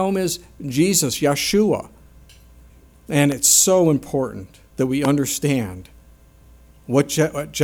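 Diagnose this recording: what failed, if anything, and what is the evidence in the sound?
Two loud pops interrupt the sound, at 3.32–3.34 s and 5.05–5.07 s, the second stronger, peaking roughly 15 dB above the surrounding signal versus about 10 dB for the first. Each is a single sharp transient, and the sound continues unbroken underneath. On a waveform they appear as isolated spikes. A spectrogram shows thin full-band vertical lines. The likely cause is a voltage step entering the analogue wiring, from a plug, switch or static discharge.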